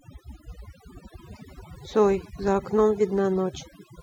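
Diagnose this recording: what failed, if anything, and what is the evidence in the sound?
Overdone noise removal at the processing stage runs throughout the speech: gaps fall to near silence with twinkling specks. Unlike low-bitrate codec swirl, the damage tracks the noise floor, with quiet voice bands gated away along with noise.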